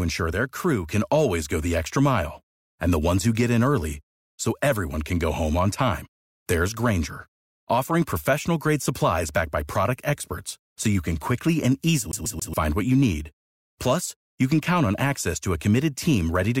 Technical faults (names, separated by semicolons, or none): CD stuck on one turn